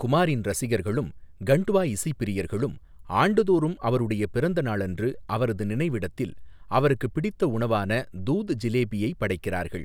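No technical faults occur at any point in the recording, so there is nothing to describe in time order.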